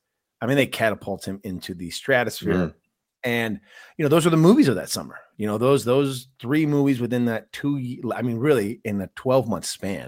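A recording of speech, and no technical fault can be heard anywhere in it. There is nothing to time or trace to a cause.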